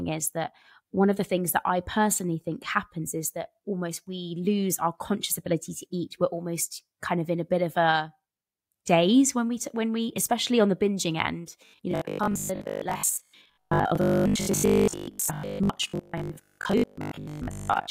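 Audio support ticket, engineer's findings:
Robotic sound from repeated short buffers, 11.66–17.9 s: the voice itself becomes a rigid 50 Hz buzz. Likely a starved buffer, fitting 20 ms, looping.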